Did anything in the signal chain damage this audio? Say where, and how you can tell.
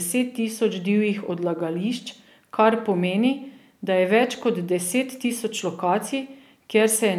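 No, nothing along the signal chain has left an audible mark on this speech recording.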